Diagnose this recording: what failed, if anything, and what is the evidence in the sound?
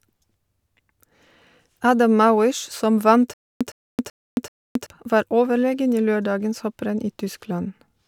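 The playback or streaming stage most likely stalled on an empty buffer and, on each retry, replayed its last fragment before running dry again. Between 3.34 s and 4.86 s the speech breaks into a stutter with silent gaps: a burst of about 111 ms repeats four times, each followed by roughly 272 ms of dead digital silence, giving an even cycle of about 382 ms. The speech that belonged in that stretch never plays and is lost.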